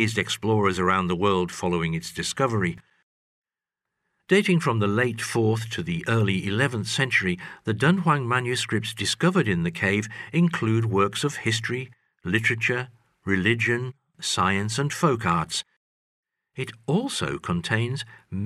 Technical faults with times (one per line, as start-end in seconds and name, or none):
none